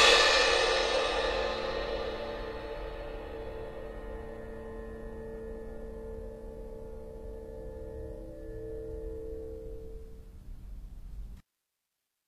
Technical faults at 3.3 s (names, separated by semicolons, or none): HE-AAC compression